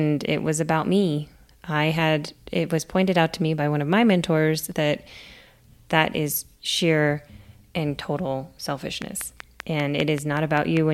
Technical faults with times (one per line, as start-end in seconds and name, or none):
9.02-10.78 train of clicks